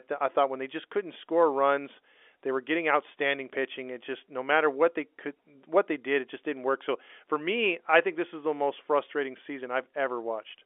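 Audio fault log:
No fault to log; the speech carries the ordinary narrow band of a G.711 telephone line, working as it should.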